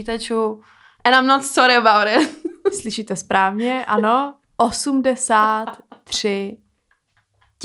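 From 5.3 s to the end, the resampler restarted on every block: each 100 ms block was upsampled, likely from 24 kHz to 48 kHz, without its neighbours, leaving errors at block edges. A 10 Hz tick rides the speech, seen as evenly spaced vertical spectrogram lines and small waveform steps.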